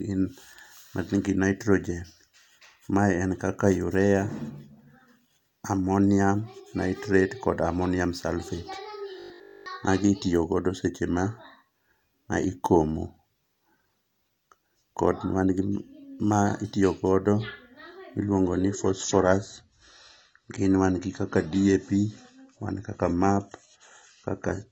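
From 9.2 to 9.66 s, the audio was likely starved of fresh data, so the player kept looping the last short buffer instead of waiting, which gives robotic sound from repeated short buffers. Practically all of that stretch is recycled material. The repeats impose a steady 50 Hz buzz, which fits a buffer of about 20 ms, and the speech becomes a rigid, metallic drone that only loosely tracks its original shape.

At 18.23 s the stream switched to a lower-bitrate version and stays there to the end, a case of an adaptive stream at a lower bitrate. The change fits AAC dropping from 96 kbit/s to 24 kbit/s. The switch is abrupt and has no gap. After it, coding artefacts become more audible.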